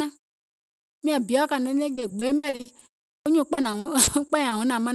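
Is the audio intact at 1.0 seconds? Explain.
No. From 0.97 to 1.03 s there is a clipped start after a pause: after about 0.87 s of silence, the first 58 ms of the sound that begins "miȧŋ biɔ̀ kȧnɔ̀ɔŋ" are missing while the output device wakes up again. The utterance jumps in abruptly, without its opening. On a waveform, the envelope appears at full level with no rise. On a spectrogram, energy starts as a hard vertical edge.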